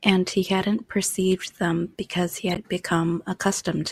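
Speech clip with a corrupt frame decoded from 2.50 to 2.57 s: damaged compressed data, roughly three frames, plays as a brief chirpy burst near -15 dBFS, foreign energy rather than a concealment gap or smear.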